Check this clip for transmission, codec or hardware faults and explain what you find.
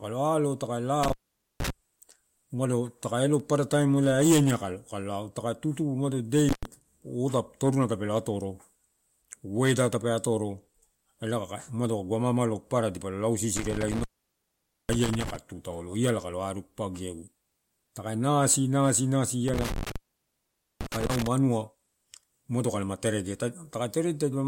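The clip has a hardware fault: intermittent contact at 1.03–1.70 s, 6.49–6.65 s, 13.57–15.36 s (just before "tu taolo iala") and 19.48–21.27 s. A loose connection opens for 0.47 s, 0.10 s, 0.85 s and 0.85 s. The speech drops out to faint hiss, with crackle at each break.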